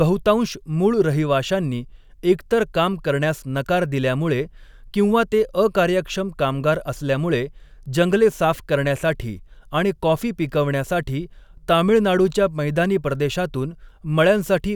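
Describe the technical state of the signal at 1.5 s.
At 1.5 s the speech signal is intact, with no dropout, distortion, glitch or other technical fault audible at that point.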